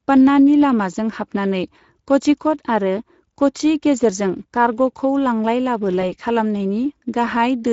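Speech runs hoarse, grainy and noisy from start to finish, with plainly audible coding damage. This is the Speex codec squeezing the excitation signal into too few bits, which fits a setting around 17 kbps. At 6.01 to 6.05 s the sound briefly smears and fades, and stays weak for a moment afterwards. That is VoIP packet loss concealed by the speech codec. The decoder extrapolated its last pitch and filter across the gap, consistent with a single lost 20 ms frame.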